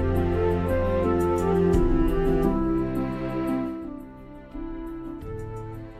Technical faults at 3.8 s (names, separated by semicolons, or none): zipper noise